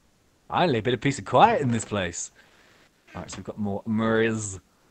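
The clip was carried over a call path whose audio stops at about 8 kHz, which fits Opus at a modest bitrate. Comfort noise replaces the background three times: from 0.00 to 0.49 s, 2.47 to 3.07 s, and 4.77 to 4.91 s. In each gap the natural background, sitting about 40 to 43 dB below the loudest sound, gives way to a steady, featureless hiss. The level is unchanged in the first gap and shifts by about 3 dB in the later two, likely from Opus discontinuous transmission filling pauses with synthetic noise. At 0.47 to 0.49 s the onset is clipped by the voice detector. The first 20 ms of the returning sound is missing, so it starts abruptly without its soft attack, likely because the detector was slow to register sound and comfort noise played in its place.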